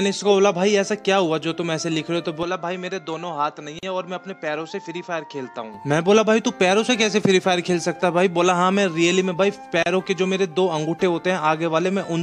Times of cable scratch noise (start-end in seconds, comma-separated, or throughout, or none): none